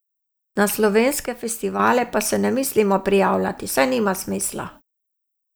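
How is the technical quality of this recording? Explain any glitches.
There is one clear glitch. From 1.26 s to 1.80 s the speech drops abruptly in level by about 6 dB for roughly half a second, then returns just as suddenly. The likely cause is one channel dropping out. When a stereo recording is folded down to mono, losing one side halves whatever both channels shared, which gives exactly this 6 dB step, and anything present only in the missing channel vanishes for that stretch.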